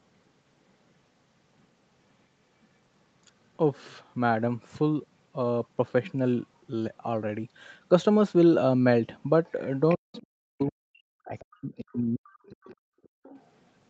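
At 9.89 to 9.95 s a brief scrap of a second voice surfaces, roughly 20 dB under the talker, and returns at 10.14 to 10.24 s. This is the other side's voice leaking through, likely far-end loudspeaker sound that the echo canceller failed to remove from the microphone. On a spectrogram each scrap is a short, faint harmonic smear whose pitch track doesn't follow the talker's. In the waveform it is a small bump riding on the main signal.

From 9.96 to 12.73 s the talker's speech is suppressed in double talk. The likely cause is both sides speaking together, so that the canceller could not tell its own talker from the echo and pulled everything down. The voice dips and breaks up in pieces, about two seconds in total, at worst falling roughly 40 dB. The waveform envelope shows ragged holes. The spectrogram shows the talker's harmonics thinning and vanishing in blocks, under the 8 kHz ceiling of the call path.

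Leakage is heard again at 12.69 to 12.76 s and over a longer stretch from 13.03 to 13.68 s. Each time it is fainter, around 30 dB down, as detached fragments.

Between 13.01 and 13.23 s the background is gated by the echo canceller. While the loudspeaker plays, the room sound is clamped down for around 150 ms, by about 37 dB at the deepest, then returns. The spectrogram shows a dark vertical gap in the noise floor, and the waveform shows a near-flat notch.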